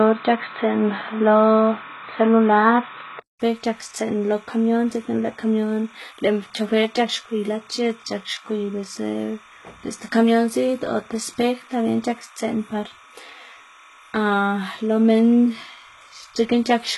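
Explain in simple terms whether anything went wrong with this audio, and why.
Timecode bleed, throughout: a steady chirping warble sits well below the speech for the whole clip, flipping between about 1 kHz and 2 kHz. This is linear timecode, running at 30 frames per second, leaking in from a neighbouring track or cable.

HE-AAC compression, throughout: the treble sounds heavily damaged, gritty and metallic, and nothing reaches above about 11.8 kHz. This is likely HE-AAC v2 coding, which keeps only the lower frequencies and fakes the treble by copying lower bands upward, so it never quite matches.

Input switched to a poorer device, from 0 to 3.4 s: the opening is dull and boxy, with nothing above 4 kHz, its own background hiss and a different loudness. At 3.4 s a 200 ms gap leads into fuller sound, likely where recording moved off a narrower-band microphone or headset.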